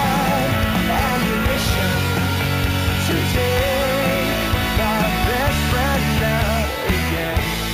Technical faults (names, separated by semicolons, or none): imaging from sample-and-hold upsampling